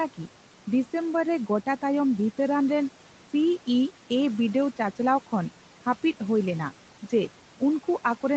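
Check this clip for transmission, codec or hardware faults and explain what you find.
The one fault is a processing artifact that lasts the whole clip. The room noise sits about 18 dB below the speech, and nothing reaches above 8 kHz, which fits the call path's bandwidth.

Noise suppressor artifacts, throughout the speech: the suppressor treats bands holding steady room noise as unwanted and lowers them frame by frame, by about 12 dB. The background therefore sinks in the gaps between phrases and rises again under speech.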